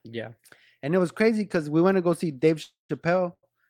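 From 2.63 to 2.91 s the speech stops and a fading buzz or hiss fills about 260 ms, ending in about 140 ms of silence. On a spectrogram this shows as smeared, decaying bands, then a blank gap before speech resumes. This is a call audio freeze, likely from delayed packets draining the jitter buffer.

At 3.33 to 3.45 s a short stall from a late packet holds a sound for about 95 ms with a slight buzz or dip. The waveform shows a repeated, flattened stretch before speech continues unchanged.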